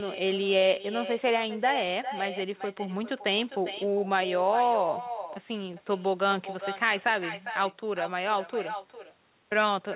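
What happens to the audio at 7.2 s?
At 7.2 s the speech is shadowed by an echo with no canceller, as it is for the whole clip. The far end plays the call through a loudspeaker. Its microphone picks that sound up again, and nothing removes it. So each phrase returns roughly 0.4 s later, about 10 dB quieter. The copy sounds thin. It is also held under 4 kHz by the call codec, which fits G.711 mu-law.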